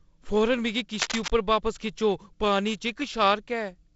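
Cable scratch noise runs from 0.94 to 1.3 s, a dense, uneven rasp of scratching and rustling laid over the speech at nearly its level. The likely cause is a worn cable or connector being moved, its contact resistance jumping rapidly.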